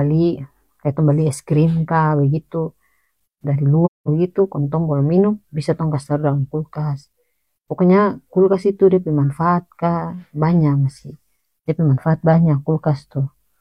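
At about 3.85 s the speech drops into a gap that lasts until 4.09 s, right before "bagitu kong tong bolom". That's AAC frame loss with muting. The decoder lost a run of frames and filled their spectrum with zeros, so there's roughly 0.21 s of nothing, which fits about five frames at typical AAC frame lengths. The overlapping windows make the sound fade out going into the hole and fade back in coming out, so the gap has soft edges.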